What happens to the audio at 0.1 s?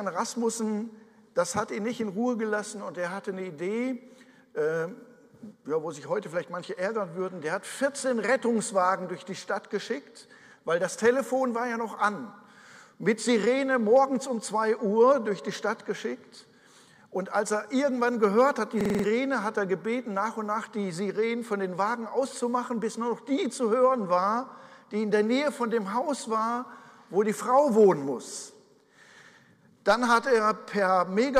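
Nothing goes wrong at 0.1 s; the audio at that moment is intact, with no dropout, click, distortion or other fault to be heard.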